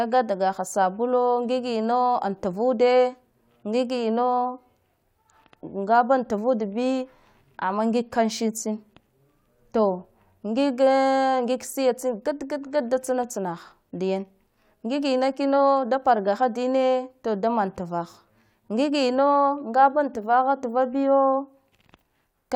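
No dropouts, clicks, level jumps or timing errors turn up at any point in the recording.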